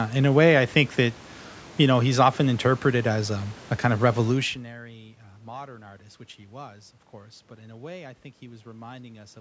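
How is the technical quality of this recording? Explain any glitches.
No technical glitches are audible in this speech recording. A room noise sits about 22 dB below the speech, the call microphone processing leaves nothing above 8 kHz, and the level shift around 4.5 s comes from the talker moving relative to the microphone.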